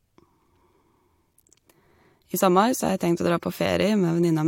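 No technical faults are audible.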